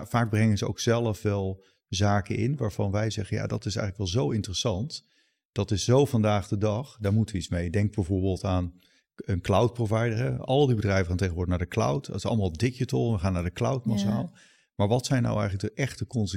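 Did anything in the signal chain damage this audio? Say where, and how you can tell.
No, nothing along the chain from capture to playback has left a mark on this speech recording that a listener can pick out. No stage stands out as having altered the signal, and there are no events or times to point to.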